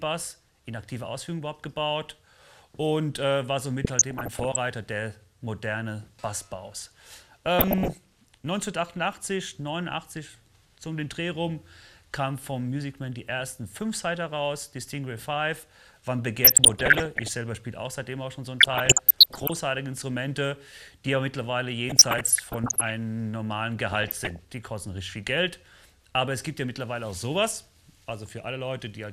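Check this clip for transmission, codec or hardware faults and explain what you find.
DAB burbling turns up six times, at 3.84 to 4.56 s, 7.59 to 7.98 s, 16.43 to 17.29 s, 18.60 to 19.59 s, 21.89 to 22.90 s and 23.92 to 24.39 s. Each burst adds short blips of noise over the sound, in single frequency bands. Weak reception lets bit errors, roughly 0.4 percent to one percent, slip past error correction and corrupt MP2 samples and scale factors across many consecutive frames.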